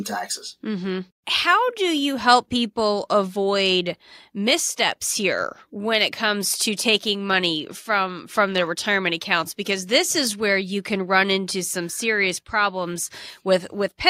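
Nothing in this recording stands out as a technical fault, so there's nothing to flag here.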